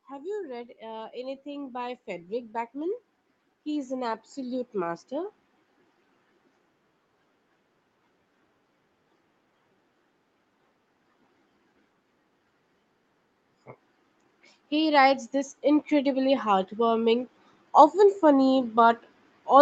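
From 0.05 to 3.04 s, automatic gain rising lifts the level by about 6 dB. Again from 3.63 to 5.39 s, by about 4 dB, and from 14.44 s to the end. Speech and background swell together.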